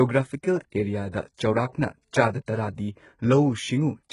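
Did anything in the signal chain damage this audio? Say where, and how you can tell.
Yes, at the codec stage, and it runs through the whole clip. The speech has a bright but fake-sounding top end: the s sounds come out gritty and a bit lispy, and the spectrum stops cold at about 11.1 kHz. That's the signature of heavy HE-AAC compression, likely at a very low bitrate, around 12 kbps. The encoder kept the lower band and synthesized the treble by copying lower bands upward under a coarse envelope, so the upper harmonics don't line up with the real ones.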